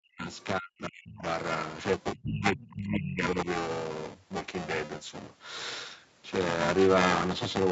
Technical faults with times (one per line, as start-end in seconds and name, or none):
0.00-7.71 buffer tearing
0.00-0.30 speech suppressed in double talk
0.38-0.45 other side's voice leaking through
0.59-1.22 speech suppressed in double talk
2.15-3.47 speech suppressed in double talk
2.62-2.74 other side's voice leaking through